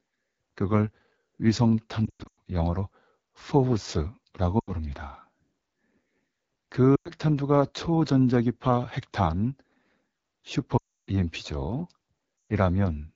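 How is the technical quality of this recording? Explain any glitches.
Technical quality is poor: a low-rate phone codec colours the whole recording, and several dropouts break it up.

AMR wideband (HD Voice) codec, throughout: the speech is squeezed through a vocal-tract model at only 8.85 kbit/s, one of its lowest rates, with the top band filled by shaped noise. The result is a plainly rough, raspy tone.

Lost AMR speech frames, at 2.06–2.38, 4.59–4.71, 6.96–7.11, 10.77–11.09 and 12.50 s: when frames failed, the decoder repeated its last pitch and vocal-tract settings at falling gain. The sound warbles and fades out briefly before returning weak. The first and fourth events are the longest, which fits roughly a quarter to a third of a second of missing audio.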